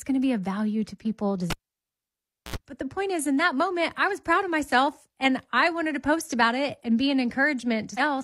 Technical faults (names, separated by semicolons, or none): cable pulled and plugged in; damaged data in a compressed stream